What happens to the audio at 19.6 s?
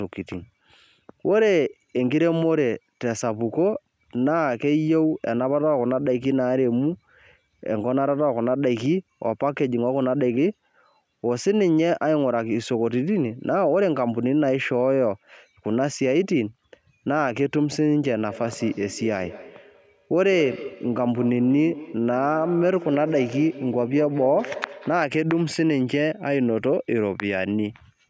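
At 19.6 s the speech is caught in feedback echo between two devices, running from 18.29 to 25.07 s. Each sound returns roughly every fifth of a second, thinner and more ringing, peaking about 13 dB below the speech. A second device in the room plays this microphone's audio back into it, and neither echo canceller removes sound from the other device.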